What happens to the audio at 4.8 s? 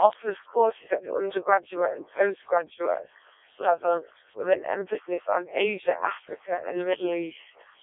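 At 4.8 s the speech carries the Codec 2 vocoder fault, present across the whole clip. Only pitch, voicing, energy and a spectral outline survive. The decoder rebuilds the voice from sine waves. It sounds robotic and buzzy, with nothing above 3.8 kHz. The heavy damage fits a rate near 0.7 kbit/s.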